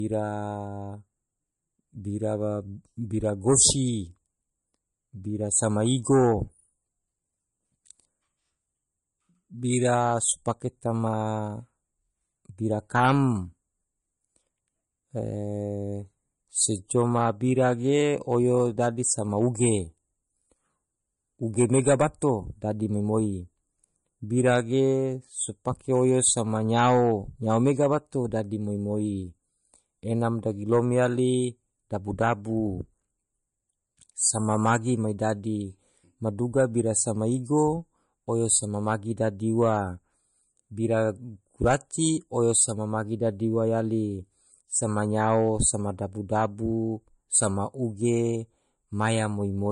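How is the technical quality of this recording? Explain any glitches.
The quality is limited throughout by one fault: low-bitrate audio saved at a high bitrate. It runs the whole length of the speech, so there is no single glitch moment. The likely cause is that the speech was first squeezed into a heavily compressed MP3 and later re-saved as a much larger MP3. The second encoding cannot bring back what the first one discarded. Nothing sounds above 10.6 kHz, which fits an original of around 40 kbit/s. Sibilants and breath noise sound dull and lack air. The artefacts left by that first heavy encoding are still audible.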